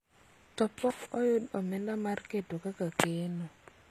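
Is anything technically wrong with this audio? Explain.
Yes. Throughout the speech there is plainly audible damage, likely from HE-AAC compression at a low rate, which fits about 24 kbps. Only the lower spectrum is truly coded; the treble is rebuilt by copying lower bands upward, so harmonics misalign and s sounds come out gritty, metallic and lispy.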